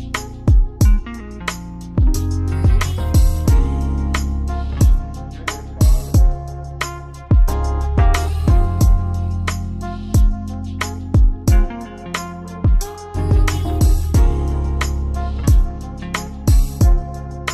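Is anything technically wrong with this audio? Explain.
No, nothing stood out as technically wrong on listening.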